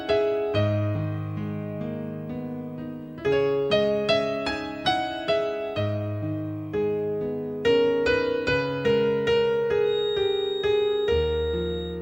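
From 9.80 s to the end at 12.02 s there is a feedback whistle. The likely cause is a loudspeaker-to-microphone loop that has reached the edge of instability, so a single frequency keeps circulating and reinforcing itself without growing into a full howl. In the sound, a thin, steady tone at 3.7 kHz sits about 15 dB below the main signal, swelling and fading slowly in level as it persists behind everything else.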